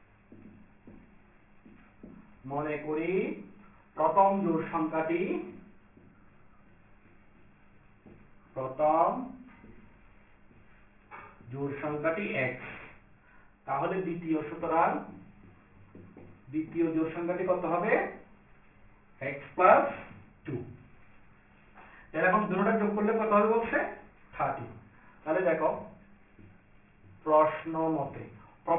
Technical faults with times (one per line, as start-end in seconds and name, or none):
0.00-28.79 aliasing